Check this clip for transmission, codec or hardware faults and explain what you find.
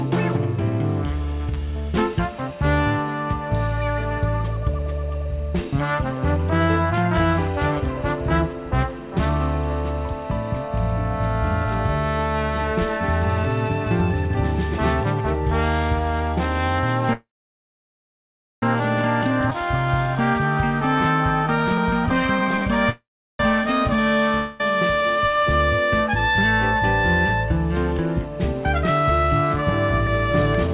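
Several network and jitter-buffer faults are audible. They sit on a call path with nothing above 4 kHz, which fits G.711 A-law at 64 kbps.

A call audio freeze occurs from 17.13 to 18.63 s. Packets were likely held up in transit, so the jitter buffer ran dry. The last sound is extended as a fading buzz, then about 1.37 s of silence. Playback then resumes where it stopped, with nothing missing and roughly 1.5 s of added delay. A second freeze runs from 22.90 to 23.40 s. Here too delayed packets are the likely cause, giving about 0.37 s of silence within a half-second gap.

A jitter buffer speed-up runs from 19.22 to 22.66 s at 106% speed. The buffer was over target after the freeze, so the receiver trimmed short pitch-period pieces repeatedly, removing about 0.2 s. Pitch holds, but the sound feels hurried. A second speed-up from 29.56 to 30.69 s runs at 107% and removes about 0.1 s.

A skip ahead occurs at 19.50 s. 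Roughly 0.7 s of audio was discarded while later audio was already queued, cutting the backlog. Playback jumps forward with essentially no gap, and the two sides are butted together almost directly.

A long network dropout spans 24.35 to 24.61 s, likely from lost packets. The receiver fills about 0.25 s by extending the last sound as a decaying buzz without reaching silence. When audio returns, the 0.25 s that never arrived is gone.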